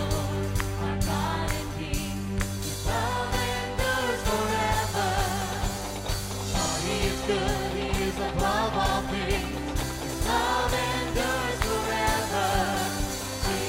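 No technical faults can be heard anywhere in the recording, and the signal stays steady and intact throughout.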